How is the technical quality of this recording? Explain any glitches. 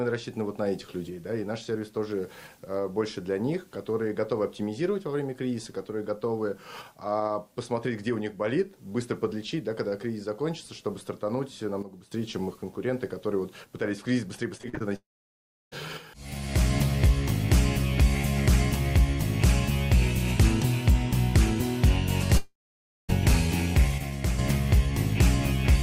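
The recording has several glitches: two abrupt level drops, a burst of choppy sound, and two stretches where the audio disappears.

Sudden gain jump, at 11.8 to 12.1 s and 24.0 to 24.4 s: a gain change was likely applied without a ramp, so the sound and its background fall together, by about 12 dB and then about 6 dB.

Repeated packet loss (robotic sound), from 14.57 to 14.82 s: five packets went missing in quick succession, none longer than 36 ms. Each hole was patched by continuing the previous sound, so nearly half of that stretch comes out choppy.

Long network dropout, from 14.96 to 15.74 s and from 22.38 to 23.11 s: audio was likely cut off for about three quarters of a second. A brief fading continuation gives way to silence lasting 0.68 s and then 0.55 s, and the sound comes back with the missing portion gone.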